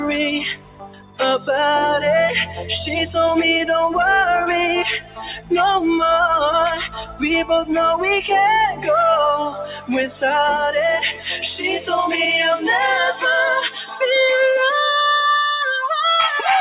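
A noise suppressor built for speech was left running on this audio, which is music or other non-speech sound. It treats sustained tones, ambience and reverberant tails as noise to be removed. Onsets pass largely intact, but anything held or decaying is pulled down, so the level pumps and flutters throughout with swings of around 10 dB, and the texture thins between attacks.

The worst moments are where the noise suppressor turned the sound down hardest, ducking sustained or fading material well below its surroundings:
0.53–1.49 s, deepest about 19 dB
2.45–2.71 s, about 10 dB
4.99–5.52 s, about 17 dB
6.79–7.23 s, about 14 dB
8.71–8.88 s, about 11 dB
9.49–10.23 s, about 15 dB
11.12–11.28 s, about 12 dB
13.66–14.02 s, about 11 dB

In each span, held or fading sounds sink or have their decay cut short, for roughly 150 to 700 ms at a time. The audio also carries through a call path with nothing above 4 kHz, which fits a narrowband codec such as G.711 A-law at 64 kbps.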